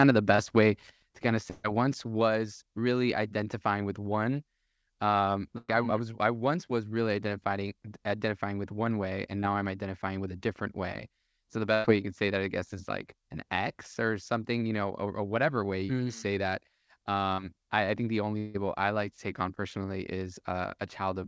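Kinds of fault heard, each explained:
Short concealed packet loss: At 0.36, 9.40 and 17.34 s, 20 to 40 ms went missing and were filled by continuing the previous sound. These are brief smears or wobbles, shorter than any burst.
Burst of packet loss: At 1.50, 5.58 and 11.74 s, 100 to 140 ms was lost. The last sound is held and fades, and the sound then resumes later, skipping the missing part.
Long network dropout: At 18.38 s, about 160 ms is bridged by a fading continuation with no silence, likely a longer network dropout rather than a packet burst.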